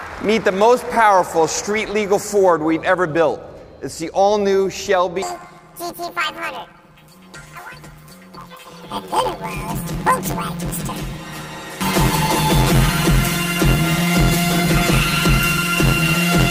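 Planar audio read as interleaved, from 5.22 s to the end: each 11.6 ms block, which fits 512-sample blocks, replays its left then right halves, giving a robotic 86 Hz buzz.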